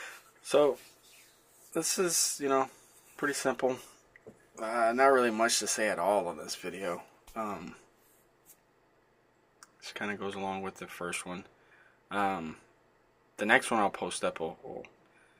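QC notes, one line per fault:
No faults heard anywhere in this clip.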